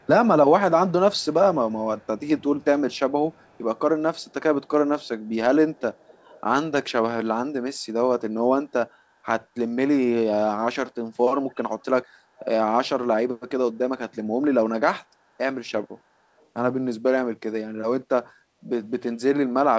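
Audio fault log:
0.0–0.07, 1.17–1.26, 1.98–6.41, 11.5–12.46 and 16.38–16.46 s: echo leak. A faint copy of the speech trails 278 ms behind, most audible at 11.5–12.46 s. The likely cause is a loudspeaker pickup the far-end canceller missed. Spectrograms show weak ghost harmonics offset by 0.28 s.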